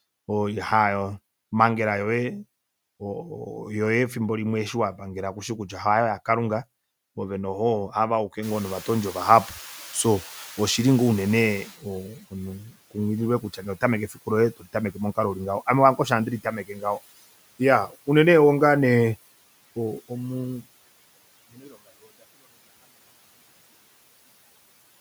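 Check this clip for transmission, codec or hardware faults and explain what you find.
Two noise suppressor faults are audible, both tied to the room noise jumping up by about 21 dB near 8.5 s.

Noise suppressor catching up, 8.42 to 11.78 s. The background rises abruptly and the suppressor's noise estimate trails it. For about 3.4 s the louder noise passes with little reduction. It then sinks by about 12 dB once the estimate settles.

Speech cut by the noise suppressor, at 13.41 to 13.65 s, 14.08 to 14.27 s, 14.57 to 14.75 s (just before "momukalo ulingaho ame lange") and 16.67 to 16.83 s (just after "ame lange osho handi"). The suppressor mistakes parts of the speech for noise. It pulls them down by about 10 to 17 dB for about a tenth of a second each. They sound swallowed and faint.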